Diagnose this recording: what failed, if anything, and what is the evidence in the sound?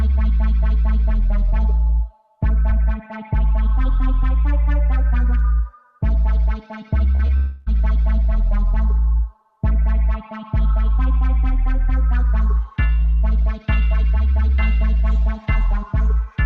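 Short concealed packet loss at 7.15 to 7.21 s and 7.27 to 7.31 s: network stage. Missing packets were extrapolated from the preceding sound, leaving brief smears before blending back.

Long network dropout from 7.37 to 7.68 s: about 0.3 s becomes a continued, fading synthetic buzz or hiss, then the audio resumes minus that stretch. This is likely a network outage.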